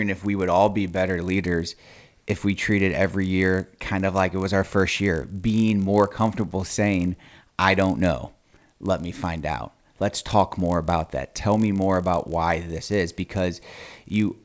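A speech recording with a steady 50 Hz buzz under the voice from start to finish, present only while there's signal. That's the resampler restarting on every block: 20 ms chunks converted from 44.1 kHz to 16 kHz separately, so each block edge gets a small error.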